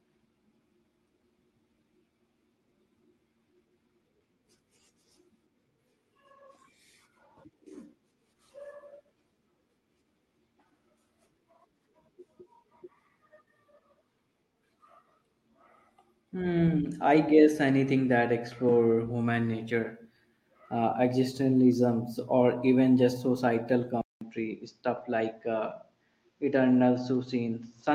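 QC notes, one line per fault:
23.81–23.87 s, 24.97–25.03 s, 27.13–27.15 s: lost packet rebuilt from error correction. Dropped packets were replaced by low-bitrate copies from the following packets, giving 40, 40 and 20 ms of rougher, noisier sound without gaps.
24.01 s onward: input switched to a poorer device, likely. A 200 ms silence, then duller sound with nothing above 7.4 kHz, about 5 dB quieter, and a new noise floor around 50 dB down.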